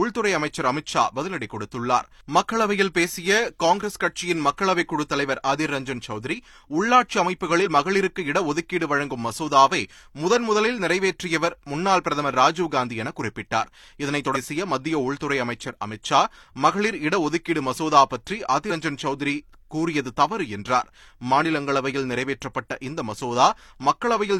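Speech that jumps forward at 7.62–7.67 s, 14.32–14.37 s and 18.67–18.72 s, losing about 40 ms, 300 ms and 100 ms of audio. These are compressed frames skipped: whole frames are dropped, in steps that fit a frame length near 43 ms.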